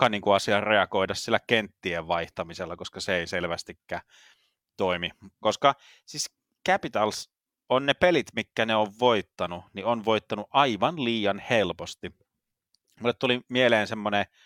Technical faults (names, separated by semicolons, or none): none